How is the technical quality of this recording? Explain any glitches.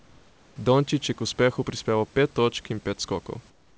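The recording has comfort noise in place of the background in two pauses. From 0.00 to 0.56 s and from 3.50 s to the end, the room background turns into a steady, featureless hiss about 5 dB and about 7 dB quieter. This is likely the receiver synthesising noise while discontinuous transmission paused sending. Unlike a gate's dead silence, a faint, smooth noise floor remains. The call path's band limit, with nothing above 8 kHz, applies throughout.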